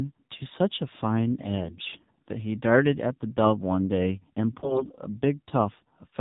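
It's a speech clip squeezed through the AMR narrowband mobile codec the whole way. Nothing above 4 kHz survives, and the voice has that buzzy, synthetic edge that points to a low AMR-NB mode, something like 7.4 kbps, where the vocal-tract model gets very few pulses per subframe. On top of that there are two bursts of AMR bit errors, from 1.62 to 2.11 s and again from 4.60 to 4.99 s. Pitch and level roughly hold, but the voice turns hoarse and gargly because flipped low-priority bits put the excitation pulses in the wrong spots and skew the fine gain and spectrum values. The second burst is rougher, with something like 10% of bits hit against about 7% in the first.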